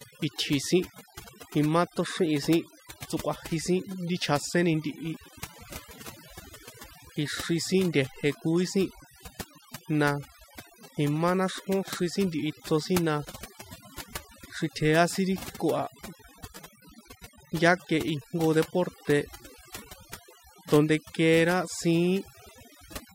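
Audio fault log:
Throughout: overdone noise removal. The noise reduction was set too aggressively, so individual frequency bands near its noise estimate are pushed down or muted outright. The background drops and breaks up into twinkling specks, and the speech's quieter components vanish too.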